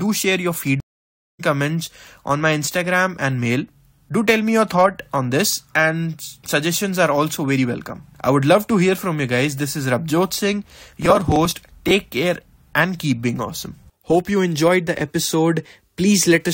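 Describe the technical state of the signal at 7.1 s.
At 7.1 s the speech signal is intact, with no dropout, distortion or other audible fault.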